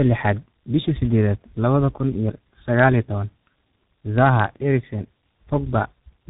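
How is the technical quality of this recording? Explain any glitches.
The recording is degraded throughout by tandem speech coding. For the whole clip the speech has passed through two speech codecs in a row. The low-rate coder's roughness and warble fit something like G.723.1 at 6.3 kbit/s, re-coded downstream by an ADPCM stage consistent with G.726 at 40 kbit/s. The second coder works on already distorted input, so artefacts compound. The result sounds rough, muffled and warbly, with nothing above 3.8 kHz.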